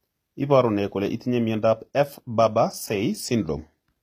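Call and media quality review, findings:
Gritty, lispy sibilants throughout, no content above 14.9 kHz; likely HE-AAC, treble rebuilt from copied lower bands at a low bitrate near 24 kbps. Bright but misaligned, not dull like a lowpass.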